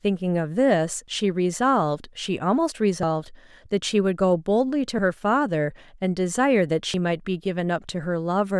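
Speech, with short skips at 1.08, 3.03, 4.99 and 6.94 s, about every two seconds, each dropping around 50 ms and butting the audio together with no gap. That's likely audio missing between chunks, lost as a 2-second chunk closes and the next opens.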